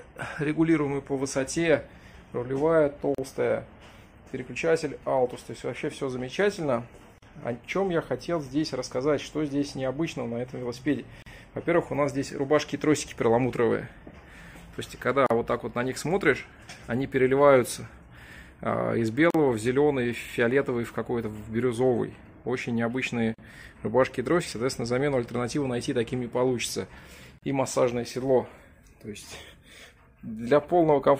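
A gap at a join of encoded pieces opens at 3.15, 7.18, 11.22, 15.26, 19.30, 23.34 and 27.38 s, about 36 ms for the first and 40 ms for the rest, roughly every four seconds. The audio was encoded in separate segments and spliced without trimming, so each encoder's leading delay and final-frame padding remain as brief silence. Each dropout has smeared edges, and the sound resumes exactly where it stopped.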